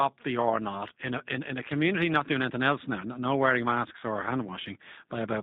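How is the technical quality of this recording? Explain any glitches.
Quality is limited by plainly audible codec damage throughout the speech. The faint room noise, about 49 dB under the voice, isn't a problem.

G.729 codec, start to finish: the low-rate narrowband sound points to G.729 at 8 kbit/s. It rebuilds speech from a vocal tract model, a pitch predictor and a few pulses per frame, so everything above 4 kHz is gone and the voice comes out rough and a bit synthetic.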